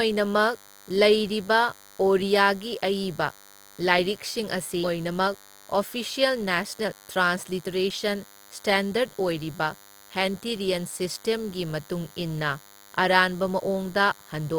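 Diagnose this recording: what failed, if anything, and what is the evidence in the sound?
The trouble starts in the analogue wiring. A thin, steady DECT cordless phone buzz at 100 Hz, rich in harmonics, sits under the speech for the whole clip, about 25 dB down. That's a nearby DECT phone or base bursting every 10 ms, with the audio circuitry rectifying those radio pulses.

At 4.83 to 4.85 s there's a skip ahead. Playback jumps straight forward with no gap filler, and roughly a second of speech is just gone, spliced almost edge to edge. The network or jitter buffer dropped a stretch because later audio was already queued.

Right after that, from 4.97 to 8.53 s, a jitter buffer speed-up kicks in. The speech runs at about 113% speed with unchanged pitch and sounds noticeably hurried. The buffer was holding too much, so it trimmed pitch-period-sized slices repeatedly, shedding around half a second of delay.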